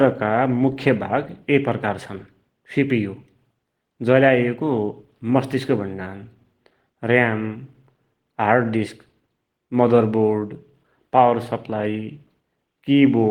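No technical faults can be heard anywhere in this recording.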